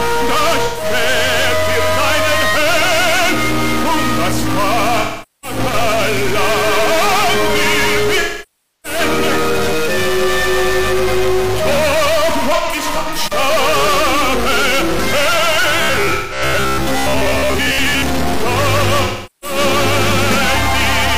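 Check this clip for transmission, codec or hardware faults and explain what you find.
Three faults turn up: a constant bit error, six dropout patches, and a stretch of metallic buzzing.

Stuck bit: Throughout, the sound is corrupted, and pauses fill with noise. The likely cause is one data bit stuck, offsetting about half the sample values.

AAC frame loss with concealment: Smeared, phasey or fading patches occur at 0.65–0.85 s, 5.00–5.58 s, 8.20–8.99 s, 12.55–13.18 s, 16.14–16.42 s and 19.04–19.58 s. Lost frames were filled in from the last good spectrum. The gaps cover 128 ms, 427 ms and 640 ms in the first three, then 299 ms scattered over 597 ms in runs up to around 100 ms, then 171 ms and 384 ms.

Robotic sound from repeated short buffers: From 15.82 to 18.04 s the sound becomes a rigid, metallic buzz at 66.7 Hz, likely from a 15 ms buffer being repeated, replacing most of the real audio.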